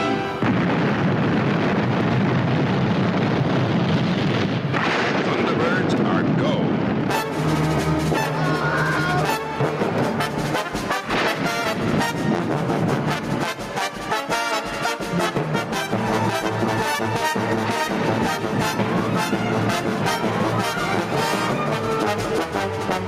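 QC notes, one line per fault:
Throughout, gain pumping: the level swings by around 10 dB, with loud and soft passages squashed together. Unlike a noise gate, the floor rises rather than cuts; likely a fast limiter fighting excessive input gain.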